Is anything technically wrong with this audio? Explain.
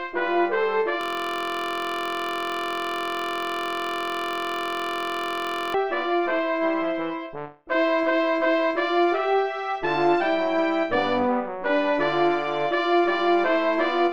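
Yes. A system hang loop runs from 1.01 to 5.74 s. The playback system stalled while the sound hardware kept reading the same stretch of its ring buffer, replaying one 23.22 ms piece of audio about two hundred times. A loop that length fits a 1024-sample buffer. Because the repeated segment is so short, it becomes a steady, flat buzz at 43.1 Hz for almost five seconds instead of a stutter.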